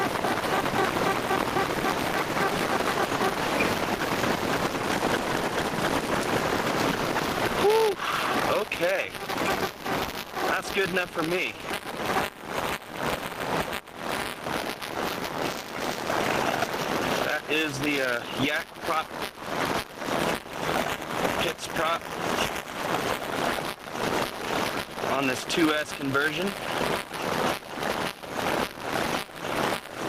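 Buffer tearing runs through the whole clip. A robotic buzz at 200 Hz rides on the sound, since a small slice of each buffer repeats audio from about 15 ms earlier. Gain pumping is also present throughout. The gain is pulled down by around 15 dB under loud sounds, likely from excessive input gain meeting a fast limiter.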